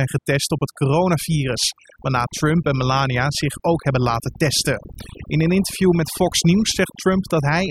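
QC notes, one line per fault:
Throughout: overdone noise removal. A noise reduction stage was driven far too hard, so individual frequency bands get pushed almost to nothing whenever their level sits close to the tool's idea of the noise floor. The softer parts of the speech fall below that line and are stripped out along with the noise, leaving gaps that sound near silent but sprinkled with twinkling specks.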